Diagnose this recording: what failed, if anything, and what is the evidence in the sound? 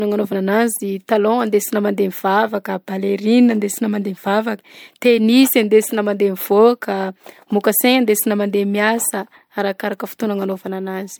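The codec stage failed: the speech was most likely run through lossy MP3 encoding about three times, giving generation loss. Throughout, the sound is swirly, smeared and hollow beyond what a rate near 100 kbit/s explains, with blurred consonant attacks and nothing above 20.1 kHz.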